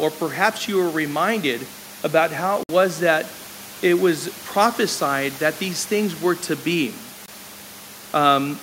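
At 2.63 s, just after "reminded about how it", the speech drops to dead silence for 56 ms, and at 7.26 s, after "things were to be", a shorter 19 ms gap follows. These are most likely Bluetooth dropouts: late packets were discarded, with the first gap's length pointing to about three lost packets and the second to one. Unlike a splice or a stall, the speech resumes further on, as though it kept playing, and even the room noise, about 21 dB below the speech, vanishes inside each gap.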